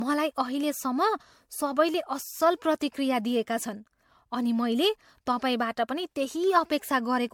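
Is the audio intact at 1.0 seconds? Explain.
No. At 1.0 s, as throughout the speech, there is generation loss: a swirly, hollow smear with blurred consonant attacks and no content above about 20 kHz. The likely cause is repeated lossy coding, consistent with MP3 at 96 kbit/s applied around seven times, each pass requantising on a shifted frame grid so noise and spectral holes pile up. A single encode at that rate would sound far cleaner, with less swirl.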